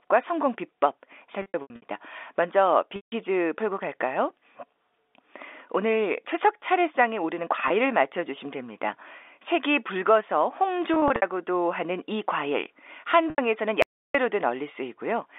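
Packet loss with pitch repetition hits the speech at 1.42 to 1.82 s (about 240 ms missing, in runs up to 80 ms), 2.96 to 3.12 s, 7.68 s, 10.94 to 11.22 s and 13.30 to 13.38 s. The receiver filled each gap by repeating the last pitch period, so the sound hangs as a buzzy held tone rather than vanishing. The longer gaps fade out before the speech cross-fades back.

At 13.82 to 14.15 s, an audio dropout to silence leaves about 320 ms of silence, likely from the input briefly disconnecting or muting. Unlike the concealed losses, there is no buzz and no fade, and even the room tone disappears. The audio simply stops and restarts abruptly within the 300 Hz to 3.6 kHz telephone band.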